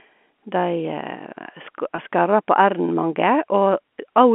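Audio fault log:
1.96–1.98 s, packet loss with pitch repetition: about 20 ms of speech went missing, which fits two consecutive 10 ms packets. The receiver filled the gap by repeating the last pitch period, so this is heard as a brief, slightly held buzz rather than a dropout. On a waveform, identical cycles repeat across the gap. On a spectrogram, the harmonics run flat and unchanged for that stretch, all within the telephone band of the G.711 line.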